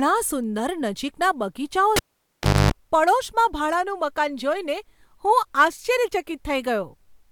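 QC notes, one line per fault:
1.96–2.72 s, cable pulled and plugged in: just after "સુંદર નજીકના બગીચાઓ", a pop drops the speech into near silence for about 0.70 s, within which a 50 Hz mains buzz lasts about 0.26 s, and a second pop brings the audio back. A live lead was pulled and reinserted, and the buzz came from the tip touching first.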